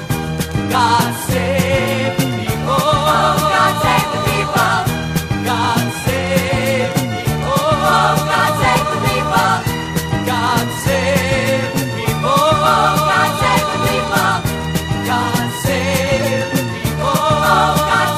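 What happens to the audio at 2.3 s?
Nothing goes wrong at 2.3 s; the audio plays through that moment intact, with no dropout, click or distortion.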